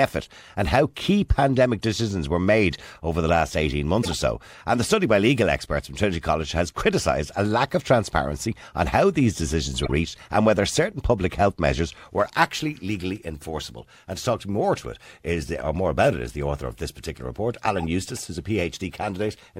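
At 4.02 to 4.13 s, 9.84 to 9.91 s and 17.77 to 17.84 s the speech is interrupted by a corrupt frame decoded fault. A few compressed frames arrive with flipped bits, and the decoder plays them anyway. Misread codes and gains put energy at the wrong frequencies, producing brief chirpy bursts of noise. The first two peak at roughly -15 dBFS. The last is fainter, at roughly -25 dBFS.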